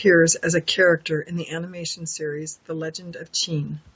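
Speech, with no technical fault to be heard anywhere in it. Some room noise sits behind the voice, nothing reaches above 8 kHz after the call's microphone processing, and the level shifts around 1 s and again near 3 s, as the talker moves relative to the microphone.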